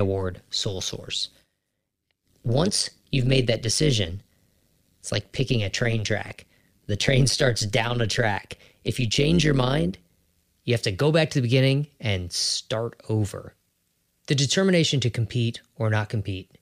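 Windowed frames were recombined with an overlap that fails to sum to constant gain, producing overlap-add ripple across this speech recording from 0 to 10.44 s. Because the gain dips and recovers once per frame, the level pulses by about 11 dB at a rate of around 100 Hz, which is fast enough to fuse into a metallic buzz laid over the talker rather than a slow wobble.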